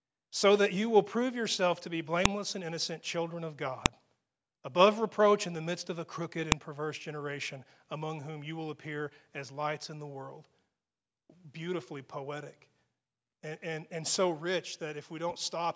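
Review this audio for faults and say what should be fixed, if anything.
Three sharp snaps cut into the speech at 2.26 s (between "prove yourself to be" and "and innocent children of"), 3.86 s (just after "and innocent children of"), and 6.52 s (after "midst of a crooked", before "perverse generation among whom"). This is a file header played as audio: each joined segment kept its header, and those bytes were rendered as a burst of samples. Unlike a dropout or buffer glitch, nothing goes missing and each snap lands at a segment boundary regardless of the speech level. Strip each WAV header before concatenating or streaming the segments.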